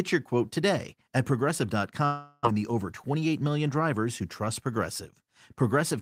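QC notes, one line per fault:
2.05–2.47 s, long network dropout: about 0.4 s of the speech never plays; instead the last sound is drawn out as a fading buzz or hiss lasting roughly 395 ms, with no stretch of true silence, then speech resumes about 30 ms earlier than before. On a spectrogram the harmonics smear into a flat, decaying band before a hard restart; the waveform shows a smooth envelope tail. Likely packets lost in transit, with the receiver concealing the gap.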